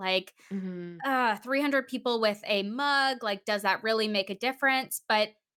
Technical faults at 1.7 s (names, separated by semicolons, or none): none